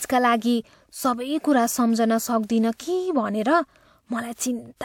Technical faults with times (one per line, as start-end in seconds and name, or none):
4.35-4.38 pre-echo
4.77-4.81 pre-echo